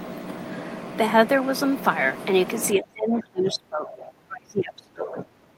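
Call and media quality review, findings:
Speech suppressed in double talk, 2.78 s to end of clip. Talker level drops sharply, at worst around 30 dB down, with the speech thinning and cutting out in pieces. Likely echo canceller unable to separate near talker from loudspeaker echo, attenuating both.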